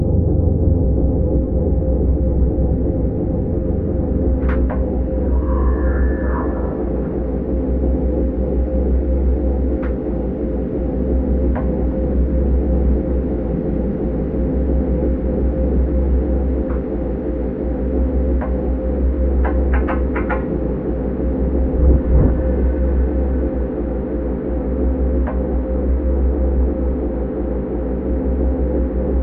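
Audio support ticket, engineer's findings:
No audible faults found in the everyday sound recording; playback path checked end to end with nothing to flag.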